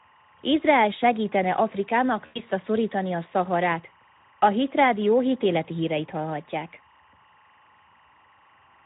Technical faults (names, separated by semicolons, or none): timecode bleed; Speex codec; VoIP packet loss concealed by the speech codec